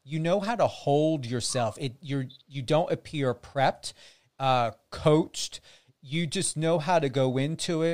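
A speech recording, and nothing is technically wrong with it.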